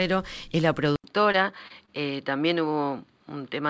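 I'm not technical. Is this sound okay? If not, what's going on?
No. At 0.96 s the sound goes dull and boxy after a short gap of about 80 ms, with nothing above 4.9 kHz and a faint new hiss, likely an input switched to a poorer device. Unlike the brief glitches, it lasts to the end.

Short concealed packet loss appears at 1.32 to 1.36 s and 1.68 to 1.72 s. A tiny piece of sound was lost, and the gap was patched with a brief smear.

A short stall from a late packet appears at 1.86 to 1.89 s. A sound is held slightly too long while waiting, but nothing is actually missing.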